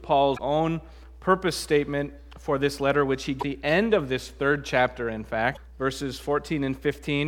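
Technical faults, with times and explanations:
0.36–0.40 s, 3.39–3.43 s, 5.53–5.57 s: damaged data in a compressed stream. Corrupted bytes make the decoder misread frames and lose sync, producing a brief chirp, squawk, click or short hole until it finds the next valid frame header.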